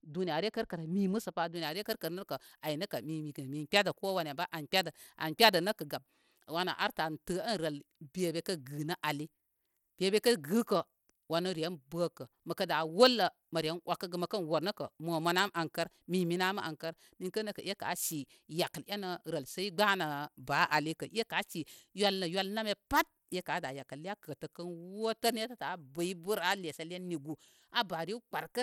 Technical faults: Bluetooth SBC compression; pre-emphasis left on

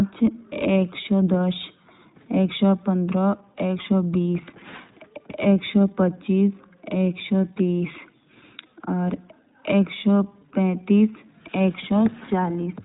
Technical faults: iLBC codec

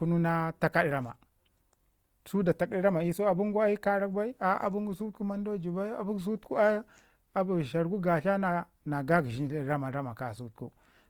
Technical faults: Opus compression

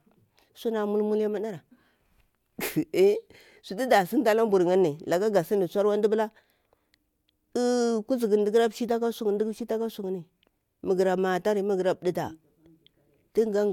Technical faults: none

